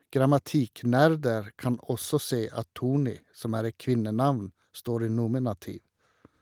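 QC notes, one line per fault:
No technical faults are audible anywhere in the speech signal.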